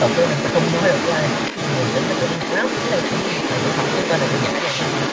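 In this speech clip, a second voice runs underneath the talker from 0 to 5.12 s, only slightly quieter. That is the other side's voice leaking through, likely an incomplete echo cancellation of the loudspeaker playback, rather than a separate person in the room.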